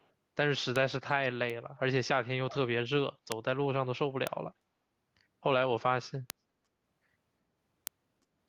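Echo leak, from 0.0 to 0.07 s: a very faint delayed copy of the speech, roughly 40 dB below the main signal and trailing it by 339 ms, shows up as a brief ghost at the very start. The likely cause is a far-end loudspeaker whose sound reached its microphone and was not fully cancelled by the echo canceller, so the residue was sent back down the line.

Bit error spikes occur at 0.76, 1.50, 3.32, 4.27, 6.30 and 7.87 s. Each is a single sharp tick, broadband and unrelated to the speech around it. A flipped bit in the digital data made the sample value jump by a power of two. Because the value snaps back after only a sample or a few, each tick is extremely short. The ticks are spread irregularly across the clip.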